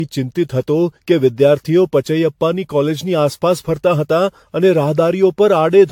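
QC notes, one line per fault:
Throughout, generation loss: The speech sounds swirly, smeared and hollow, more degraded than a single pass at this quality would leave it. Nothing is present above 19.1 kHz, which fits a 96 kbit/s AAC-LC chain. The likely cause is repeated decoding and re-encoding, around ten passes. Each pass quantises on a shifted frame grid, so noise and spectral holes pile up. Consonant attacks blur as a result.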